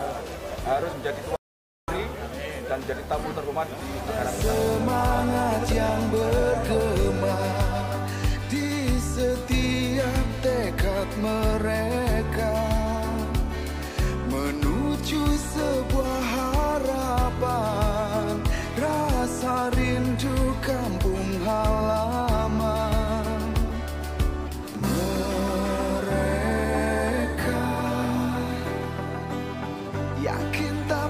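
At 1.36 s the audio drops out to silence for about 0.52 s, returning at 1.88 s. The input was likely lost through a disconnected device, a failed link or a stray mute, so silence was written instead. The sound cuts off mid-flow with no room tone, appearing as a flat waveform and an empty spectrogram band.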